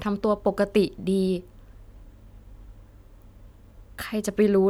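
No dropouts, glitches, distortion or level jumps turn up anywhere in the speech; nothing to flag.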